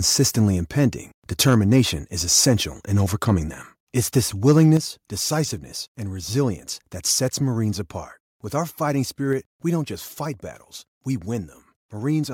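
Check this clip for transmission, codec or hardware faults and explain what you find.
Two kinds of fault stand out: harsh distortion on loud peaks, and sudden drops in overall level.

Microphone overload: from 1.47 to 1.8 s and from 4.48 to 4.74 s the loudest syllables turn gritty and crackly, worse in the second burst. The likely cause is input gain set too high, so peaks overshot the converter's limit by about 1 dB and then about 3 dB, flattening their tops.

Microphone volume stepped down: at 4.77 s, right after the heavier distortion, speech and background fall together by 6 dB, and at 9.33 s by a further 3 dB. This is likely the call software reacting to a microphone it found too loud or clipping by cutting the device's input volume in single abrupt steps.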